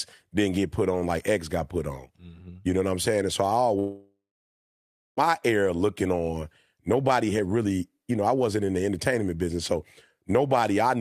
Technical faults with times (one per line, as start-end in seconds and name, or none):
3.79-5.20 long network dropout